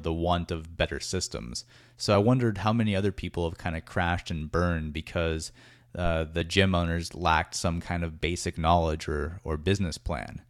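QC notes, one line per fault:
6.41 s, compressed frames skipped: a short run of encoded frames never reached the output, either lost from the file or rejected by the decoder as corrupt, so playback jumps straight past them. The speech loses roughly 15 ms, which points to a handful of small frames dropped together. The gap is heard as a tiny forward lurch in the speech.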